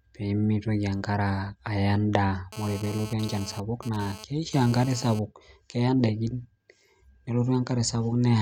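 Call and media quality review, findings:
GSM phone buzz, 2.53 to 5.19 s. Hard, raspy buzz at 217 Hz with dense harmonics, about 17 dB below the speech, unrelated to it. Intermittent, consistent with a nearby 2G handset in data transfer. The audio input circuit rectifies the RF bursts arriving 217 times per second, and the demodulated pulse train appears as audible buzz.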